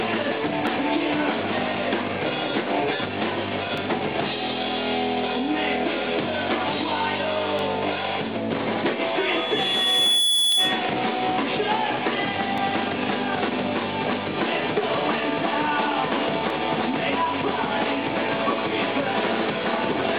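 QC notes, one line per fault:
0.67, 3.78, 7.59, 10.52, 12.58 and 16.50 s: dropped samples. Each is a single sharp click. The waveform jumps abruptly, likely because less than a millisecond of samples went missing. That gap is far too brief to remove any audible sound, so only the discontinuity is heard.
9.06–10.93 s: loudspeaker feedback squeal. A steady tone at 3.4 kHz swells over roughly a second until it sits about 5 dB above the sound. The microphone is picking up its own loudspeaker, and the loop gain exceeds unity at that frequency.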